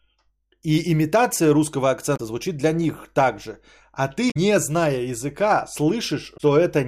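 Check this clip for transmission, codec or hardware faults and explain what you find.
Damaged data in a compressed stream appears three times in the speech: 2.13–2.20 s, 4.27–4.37 s and 6.34–6.41 s. Corrupted bytes make the decoder lose frame sync. Each produces a brief glitch.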